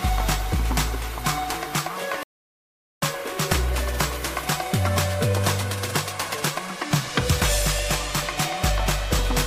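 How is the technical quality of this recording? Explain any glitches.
The recording has one clear glitch, a rebuffering stall. From 2.23 to 3.02 s the sound drops to silence. It then picks up exactly where it stopped. The player ran short of downloaded audio and waited for more. Nothing is skipped, but about 0.79 s of dead air is inserted.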